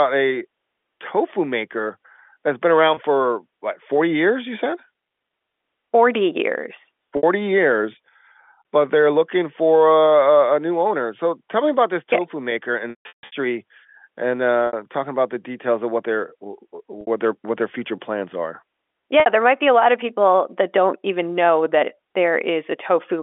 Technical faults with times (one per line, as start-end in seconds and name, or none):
2.94-2.97 packet loss with pitch repetition
7.17-7.23 packet loss with pitch repetition
12.90-13.32 packet loss with pitch repetition
14.67-14.73 packet loss with pitch repetition
17.01-17.07 packet loss with pitch repetition
19.20-19.26 packet loss with pitch repetition